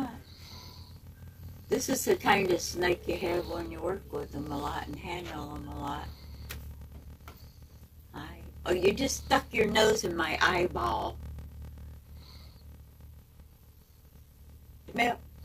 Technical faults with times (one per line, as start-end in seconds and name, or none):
0.00-15.45 block size mismatch (padded)